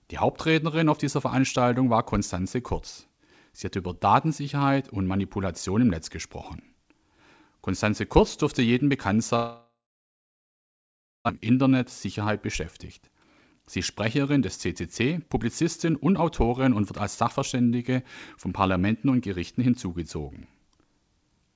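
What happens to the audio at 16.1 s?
At 16.1 s the clip is inside a jitter buffer speed-up running from 15.02 to 16.23 s. The receiver drained excess buffered audio by cutting short pitch-period pieces, about 70 ms in total, so speech plays roughly 6% faster at unchanged pitch and sounds slightly hurried.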